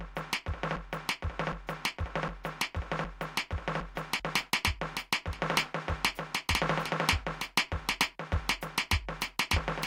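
A broken-record loop runs from the very start to 4.2 s: a 0.76 s fragment of the music repeats exactly, back to back, five times. It is likely a stalled player or stream resending its last buffered piece, so the intended music is lost.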